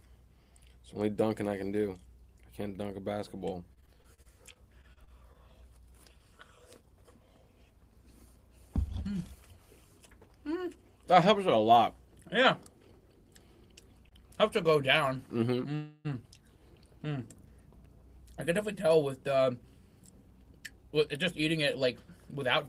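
From 3.73 to 5.36 s there is repeated packet loss, which gives a robotic sound. Fourteen short holes, the longest 39 ms, are each patched by extending the preceding sound. That covers about 18% of the stretch, and 160 ms of real audio is missing, so the result is choppy and robotic. Unlike a stall, pieces are actually lost.

From 6.83 to 7.39 s a jitter buffer speed-up trims short pitch-period pieces, about 50 ms in total, to bring down built-up delay. The audio runs at 107% speed with unchanged pitch. It sounds hurried rather than chopped, and nothing is patched in.

Short stalls from a late packet occur at 14.09 to 14.13 s and at 15.17 s. The jitter buffer runs dry, and the last sound is held for 22 ms and then 16 ms, a brief buzzy smear. The audio then resumes where it stopped, with nothing missing.

From 15.75 to 16.07 s a call audio freeze holds the last sound for 298 ms as a fading buzz before the audio picks up where it left off, with nothing missing. 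It is likely caused by packets held up in transit, which emptied the jitter buffer. It is far longer than the stalls, and no audio is dropped, unlike the packet loss.

From 18.22 to 22.59 s a second jitter buffer speed-up runs at 105%, removing roughly a fifth of a second in small slices. This gives a milder, longer-lasting hurried feel at the original pitch.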